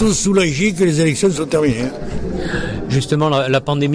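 Nothing in the recording stood out as a problem on listening.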